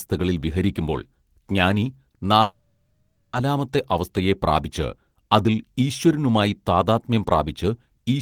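Speech here, with a call audio freeze from 2.41 to 3.36 s. The sound at 2.41 s gets stretched into a fading buzz and then trails into about 240 ms of silence before the speech picks up exactly where it left off. Nothing is lost; everything after just arrives about 0.92 s later. That's most likely packets stalling in transit so the jitter buffer ran dry and the receiver padded the gap with the last sound.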